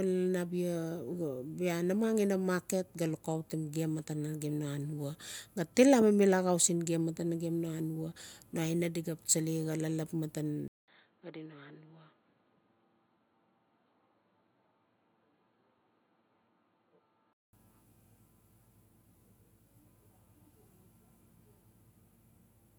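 At 10.68 s the speech cuts out for about 200 ms, then returns duller, boxier and a few decibels quieter, with faint new background noise. This is the pattern of the input switched to a poorer device, likely a change to another microphone or a headset's call profile. On a spectrogram, everything above 4.3 kHz vanishes, leaving a flat ceiling. The waveform shows a gap and then smaller peaks. Full bandwidth and level return at 17.53 s.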